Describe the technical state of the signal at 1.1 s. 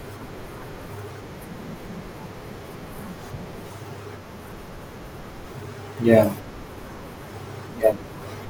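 At 1.11 s the speech jumps abruptly. This is a dropped buffer (overrun). There is no gap of silence. The sound on either side is simply butted together, and roughly a tenth of a second of the speech is missing. The likely cause is that the software failed to collect its samples in time, so the hardware overwrote them. The stream then resumed further along.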